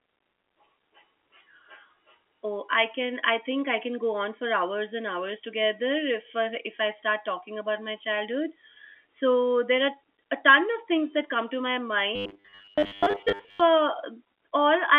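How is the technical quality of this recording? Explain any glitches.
The recording has one clear glitch, heard through a telephone-band channel consistent with G.711 coding that cuts everything above about 3.4 kHz.

From 12.16 to 13.62 s, just after "that come to my", the sound turns into robotic sound from repeated short buffers. The likely cause is audio arriving too late, with the player looping about 10 ms of sound while most of the real audio is skipped. That loop imposes a rigid 100 Hz buzz. On a spectrogram, this appears as evenly spaced harmonic lines at multiples of 100 Hz, and the waveform shows an identical short cycle repeating.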